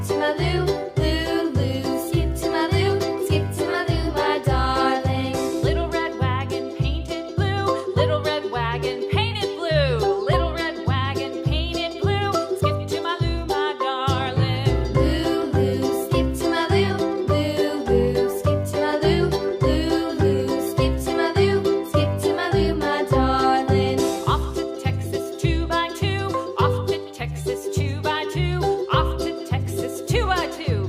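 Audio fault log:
No faults detected in this recording.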